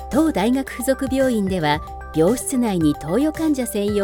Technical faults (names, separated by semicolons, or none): none